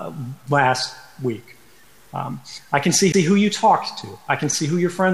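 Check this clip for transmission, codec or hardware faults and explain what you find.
There's one fault here, a CD skip at 3.12 s. Something, a knock or a flaw on the disc, made the laser lose its track and land on another turn of the spiral. The player mutes for a tiny moment, around 15 ms, then carries on from that new spot. You hear it as a quick tick, and the sound after it doesn't follow on from what came before, because playback has jumped to a different point on the disc.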